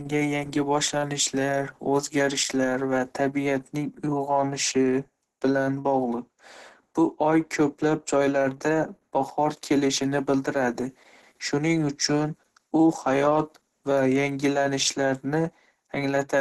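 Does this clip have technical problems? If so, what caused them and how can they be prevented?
Yes. The speech sounds muffled and hoarse throughout, with nothing above 12.1 kHz, likely from heavy Opus compression, which fits about 12 kbps hybrid mode; a spectrogram shows a flat ceiling there. Encoding at a higher bitrate prevents it.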